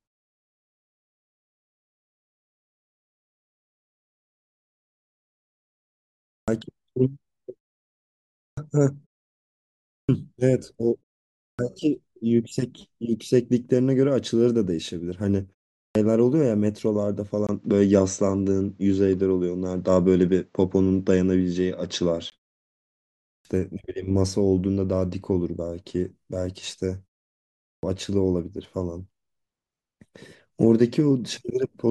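Clipped starts after a pause occur at 6.34, 8.45, 9.95, 11.46 and 15.82 s. Each time the sound resumes out of silence, the output device has dozed off during the gap and needs roughly 120 to 140 ms to wake and lock again. That opening slice is lost, so the speech begins abruptly, without its first sounds. The first instance follows over six seconds of silence; the later ones follow gaps of only 0.36 to 0.97 s.

An input switch to a poorer device runs from 17.47 to 22.32 s, likely a change to another microphone or a headset's call profile mid-recording. A 20 ms silence marks the switch. After it the sound turns dull and boxy, with nothing above 8 kHz. The level shifts by about 5 dB, and a new noise floor sits about 45 dB below the signal. At 22.32 s the fuller sound returns.

Clipped starts after a pause recur at 23.32 and 27.69 s, after gaps of 1.02 and 0.69 s. Again about 130 to 140 ms of onset disappears while the device wakes, and the speech snaps in mid-sound.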